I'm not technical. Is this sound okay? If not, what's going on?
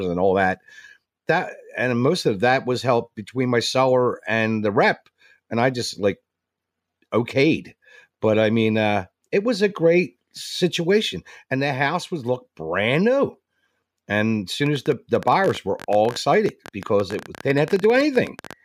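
No. From 14.66 to 18.54 s there is a train of clicks: a rapid, uneven ticking, about 15 per second and roughly seventy in all, sitting over the speech and the pauses. It's likely interference from nearby equipment or a faulty connection or power supply.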